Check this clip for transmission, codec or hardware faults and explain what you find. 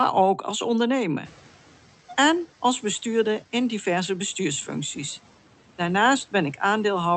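One fault is present, in the noise suppression rather than the transmission path or hardware.

From 1.24 to 1.56 s, the noise suppressor is catching up. The room noise jumps by about 23 dB around 1 s, and the suppressor's noise estimate lags behind. The louder background passes through under-reduced, then drops by about 6 dB as the estimate adapts over 320 ms.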